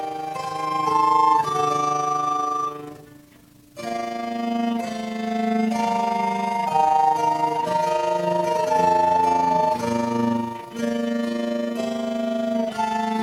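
From start to end, overlap-add ripple: frames were rejoined with an overlap whose window gains don't sum evenly, so level pulses by about 6 dB around 30 times a second. Unlike irregular dropouts, this rough flutter stays perfectly periodic and never pauses.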